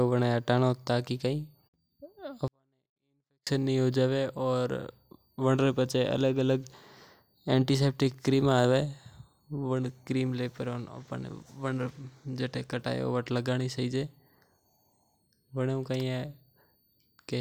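From 2.48 to 3.47 s a 24-bit alignment error makes the speech about 48 dB quieter yet clean and undistorted, unlike a dropout, which goes fully silent.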